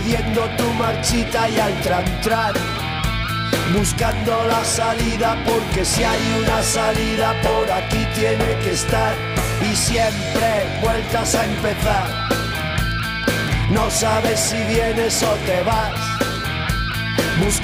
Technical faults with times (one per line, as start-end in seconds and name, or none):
0.11-17.64 word clock ticks